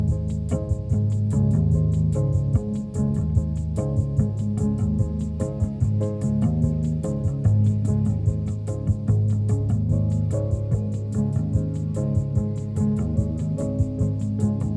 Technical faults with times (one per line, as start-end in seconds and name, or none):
none